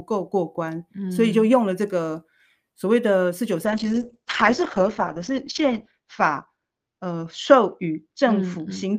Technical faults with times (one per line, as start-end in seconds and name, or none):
3.66-8.99 call bitrate drop